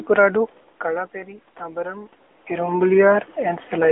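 It's a short speech clip run through the AMR narrowband mobile codec for its whole length. Nothing gets through above about 3.8 kHz, and the low end is cut off below roughly 300 Hz, so it has that boxy phone-line sound. The codec damage is plainly audible: the voice comes out buzzy and a bit synthetic because the vocal-tract model only gets a few pulses per frame to work with, which fits a mid-range AMR-NB rate of around 10 kbps. The background room noise swirls and warbles as the codec mangles it. The level shifts near 0.5 s and again near 2 s are just the talker moving relative to the mic, not a system fault.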